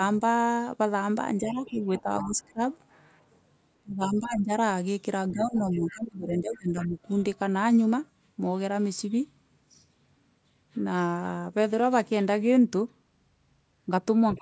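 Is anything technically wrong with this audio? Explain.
Yes. Between 1.38 and 2.6 s, 3.81 and 6.98 s, and from 14.35 s to the end, the speech dips by up to roughly 20 dB. This is speech suppressed in double talk, likely because the echo canceller turned down both sides while they overlapped.

A faint second voice, about 15 to 25 dB below the speech, leaks through at 1.5 to 2.45 s, 4.04 to 4.1 s, 5.39 to 6.86 s and 14.34 to 14.39 s. This is the other side's voice leaking through, likely loudspeaker echo that the canceller left in the microphone signal.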